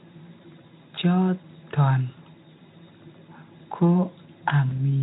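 At 4.69 s a single packet goes missing in the VoIP stream, a gap that fits one lost 20 ms frame, and the Speex decoder hides it with packet loss concealment. It keeps generating sound from its last pitch and filter while turning the gain down. Because each following frame builds on that guessed state, the disturbance runs to about 4.83 s, heard as a brief stretched, weakened smear before the speech firms up again.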